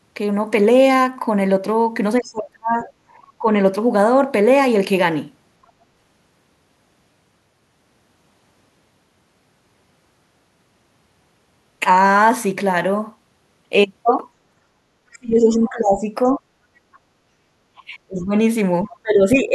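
From 2.2 to 3.61 s the talker's level sinks in patches, roughly 30 dB at its deepest. This is speech suppressed in double talk. The echo canceller likely turned the talker down along with the loudspeaker echo. Within that stretch, from 2.23 to 2.88 s, a faint second voice comes through, about 25 dB below the speech. That is the other side's voice leaking through, likely echo the canceller failed to remove. The pattern repeats. Speech dips from 15.13 to 16.45 s, with leakage at 16.24 to 16.37 s. A fainter scrap, about 35 dB down, follows at 16.93 to 16.98 s. From 17.79 s to the end, speech drops by about 25 dB, with leakage at 18.84 to 18.97 s.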